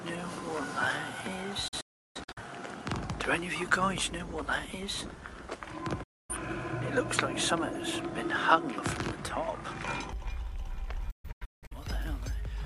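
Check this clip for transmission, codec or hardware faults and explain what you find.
Two kinds of fault are present: a degraded input device for most of the clip, and three digital broadcast dropouts.

From 0.0 to 10.13 s the sound is band-limited, with nothing above 11.2 kHz, a level change of about 5 dB, and a noise floor roughly 35 dB down. This likely comes from the input being switched to a poorer device. At 10.13 s the sound opens up again with no gap.

The digital broadcast dropouts occur at 1.68–2.41 s, 6.03–6.35 s and 11.11–11.77 s. The receiver muted after losing frames, with 8 ms fades into each gap. The first gap is scattered holes totalling 0.47 s, with a longest run of 0.34 s. The second is one 0.26 s gap. The third totals 0.43 s, with a longest run of 0.17 s. These lengths fit frames of about 43 ms.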